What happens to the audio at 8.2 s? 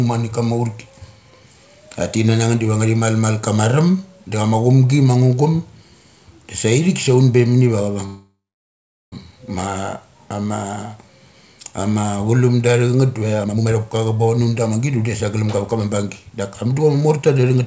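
The speech stalls in a call audio freeze from 8.06 to 9.14 s, just after "sa un be mani". The likely cause is packets arriving late, so the jitter buffer ran dry. The receiver stretches the last sound into a fading buzz or hiss, then goes quiet for about 0.75 s. When the packets arrive, the speech resumes exactly where it stopped. Nothing is lost, but everything after lands about 1.06 s later.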